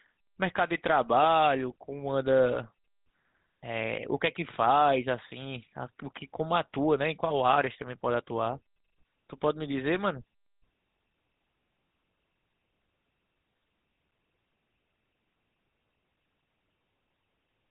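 GSM full-rate codec damage runs from start to finish. The sound has been squeezed through a vocal-tract model excited by regular pulse trains, which fits the 13 kbps full-rate coder, leaving a plainly audible buzzy, gravelly roughness and nothing above 4 kHz.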